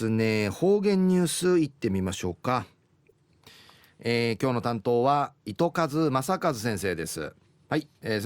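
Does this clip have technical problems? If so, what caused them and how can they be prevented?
No, there are no technical problems in this recording.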